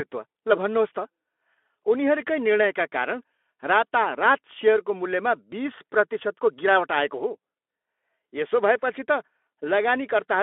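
The speech comes through a Speex link at about 15 kbps with a telephone-style band of roughly 250 Hz to 3.5 kHz, carrying only the light, slightly grainy texture that codec leaves at that rate, and nothing in the signal goes wrong along the way.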